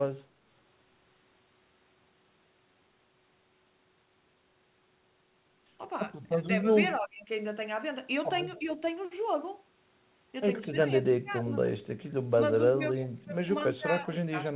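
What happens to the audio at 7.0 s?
Speech suppressed in double talk runs from 6.98 to 7.3 s. The likely cause is an echo canceller that, with both ends talking at once, could not tell this talker apart from the loudspeaker echo and pulled the level down. The voice sinks by roughly 20 dB at its deepest and thins out for about a third of a second before recovering, heard through a call path band-limited to 4 kHz.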